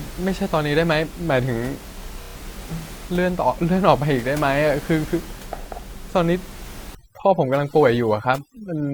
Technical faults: repeated frames; overdone noise removal

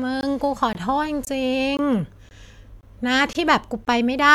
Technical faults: gap between chunks

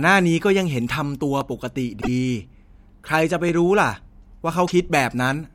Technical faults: block of digital silence; broken MP3 bit reservoir

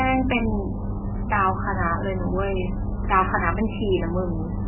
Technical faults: MP3 compression

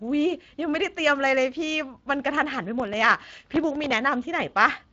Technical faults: Speex codec; processor overload crackle

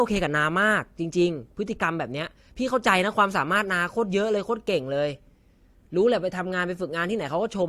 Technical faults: none

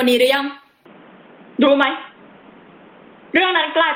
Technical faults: gain pumping; input switched to a poorer device

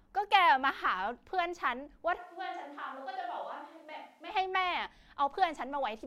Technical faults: switch to a distant microphone

